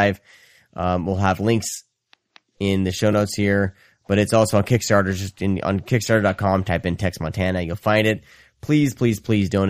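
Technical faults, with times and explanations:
No technical faults can be heard in this speech recording. There is nothing here that needs a time or an explanation.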